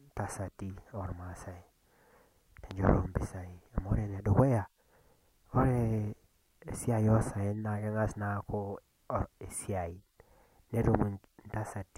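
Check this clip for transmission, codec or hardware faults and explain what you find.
One fault is present: a single loud pop. It occurs from 2.71 to 2.74 s, lasting about 30 ms. A sharp electrical pulse sits on top of the speech. It peaks around 10 dB above the speech level. The likely cause is a sudden voltage step, such as a plug being moved, a switch, static discharge or a driver glitch. The following circuits shape that step into a brief burst. It is heard as one sharp pop, with the speech continuing underneath.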